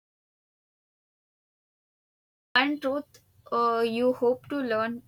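Audio dropout to silence from 0.0 to 2.56 s: the clip opens in dead silence, likely a lost input, before speech resumes abruptly at "truth uh".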